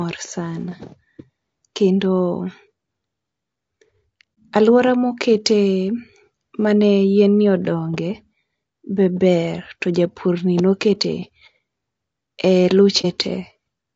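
Speech runs rough and grainy throughout, with a noisy haze between the voice's harmonics and a thin, somewhat synthetic top end. This is likely low-delay AAC compression (AAC-ELD), whose short frames resolve pitch poorly, and the plainly audible damage points to a low bitrate around 32 kbps. Two brief, soft-edged dropouts occur, from 4.34 to 4.37 s and from 13.01 to 13.06 s. The sound fades out and back in. This is AAC frame loss with muting: the decoder zeroed the missing spectrum, and the overlapping windows smoothed the gap, which fits a single lost frame of about 30 ms each time.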